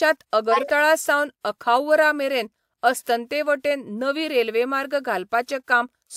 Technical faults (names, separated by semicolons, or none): corrupt frame decoded